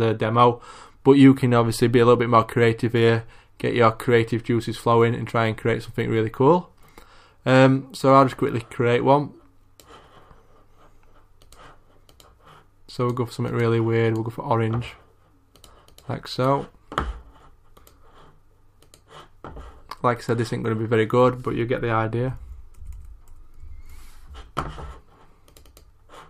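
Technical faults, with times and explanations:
No technical faults can be heard anywhere in this recording.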